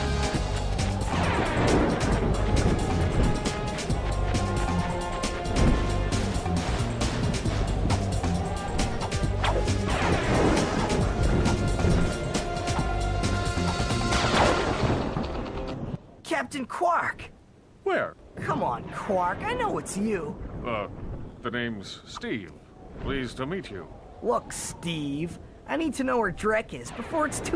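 Nothing here stands out as a technical problem; the audio just runs along without any audible glitches or interruptions.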